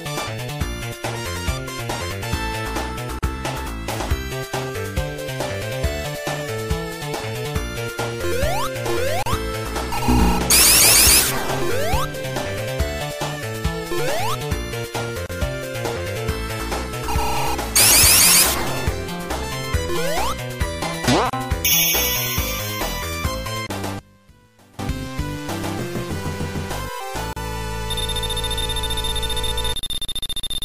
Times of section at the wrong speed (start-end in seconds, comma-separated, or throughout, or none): none